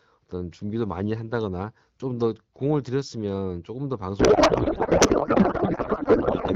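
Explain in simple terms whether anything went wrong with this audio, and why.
Something did go wrong, starting at 4.19 s and lasting to the end of the clip. It is a codec payload misread. The phone codec carries speech packed in a certain layout, and here the receiving side read that layout the wrong way, so the decoder pulled its settings from the wrong spots. The speech gives way to garbled noise and warble that barely tracks it. A dropout or a low-quality line would still follow the speech. This fault does not.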